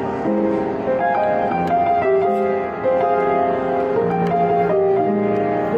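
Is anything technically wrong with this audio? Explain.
Yes. At about 4.11 s a single sharp tick interrupts the sound. It is a block of digital silence lasting about 1.45 ms, consistent with a 64-sample block of zeros, likely because the output buffer wasn't filled in time, and the signal dropped abruptly to nothing and back.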